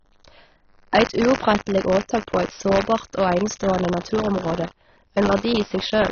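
Buffer tearing runs through the whole speech clip. The software filling the playback ring buffer and the hardware draining it have drifted out of step, so their positions cross inside each period. A small slice of every buffer, a few percent, still holds audio from a lap earlier, about 40 ms old, with abrupt joins on both sides. The result is a steady robotic buzz at 100 Hz, which fits a 10 ms buffer period. It rides on the speech and drops away in the pauses.

Also present throughout is damage that is likely from AAC compression, most plausibly AAC-LC at a low bitrate around 24 kbps. The encoder has thrown away detail it judged inaudible and given up the top of the band. Nothing is left above 6.6 kHz, so the speech sounds dull. The sustained vowels carry a plainly audible warble, and the sibilants come across smeared and fizzy rather than crisp.

From 4.66 to 4.89 s, roughly a quarter of a second, one channel drops out, likely because one side of the stereo feed was briefly lost before the mix to mono. 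Speech common to both channels falls abruptly by about 6 dB and then snaps back just as suddenly. This is heard as a short, sharp dip in loudness, layered over the continuing buzz and dullness.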